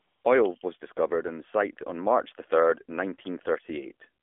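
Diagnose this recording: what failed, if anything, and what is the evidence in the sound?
The whole clip is boxed into a narrow band of roughly 250 Hz to 3.5 kHz, with plainly audible buzzy, synthetic coloring on the speech. This points to the codec stage: the AMR narrowband mobile codec running at a low mode, consistent with about 7.4 kbps, rebuilding the speech from a coarse vocal-tract model.

From 0 to 0.24 s the clip opens on smooth, steady hiss rather than the real background, and it switches off abruptly when speech begins. This is AMR comfort noise from call processing: no speech frames were sent for those 235 ms, so the receiver synthesized filler noise.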